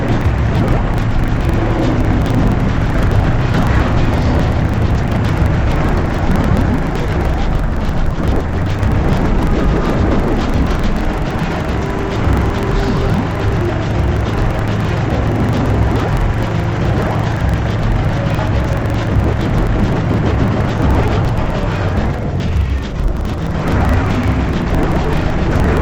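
Interleaved audio is read as planar throughout, in 42.7 ms blocks fitting a 2048-sample buffer, so sound plays an octave low, doubled and choppy.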